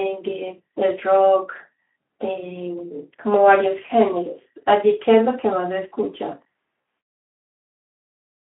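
At 6.81 to 6.85 s, VoIP packet loss concealed by the speech codec: roughly 40 ms went missing, which fits two 20 ms frames. Instead of the silent gap a plain dropout would leave, the decoder stretches the last pitch and filter into a buzzy tone or coloured noise that fades, and the Speex-coded speech stays weakened briefly afterwards.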